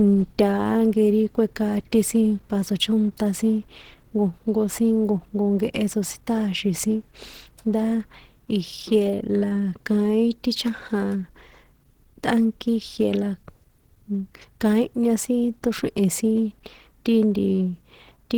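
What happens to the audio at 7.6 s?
At 7.6 s the speech sounds hoarse and grainy, with a rough, noisy texture running through it, as it does throughout the clip. The likely cause is Opus compression in its hybrid speech mode, which fits a low bitrate of around 16 kbps.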